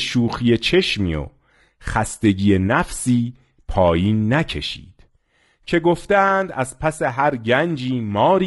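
From start to finish the speech sounds rough and grainy, with a hiss-like fill sitting between the pitch harmonics and a top band that comes across dulled and somewhat synthetic. The damage is plainly audible. This is likely low-delay AAC compression, the AAC-ELD kind used for video calls, at a rate that fits about 32 kbps. Its short frames resolve harmonics less finely, and at this rate too few bits reach the voice's fine structure.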